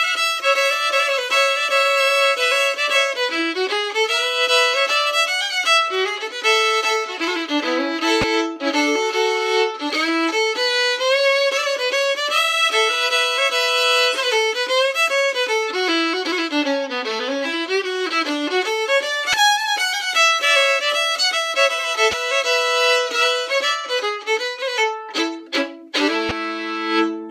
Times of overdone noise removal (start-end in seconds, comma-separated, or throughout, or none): none